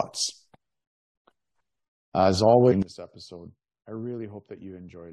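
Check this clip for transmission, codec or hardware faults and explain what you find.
One fault: a sudden gain jump. At 2.82 s the level steps down by about 18 dB and stays there to the end, likely a gain setting applied without a ramp. Sound and background noise fall together instantly, unlike a fade or a dropout.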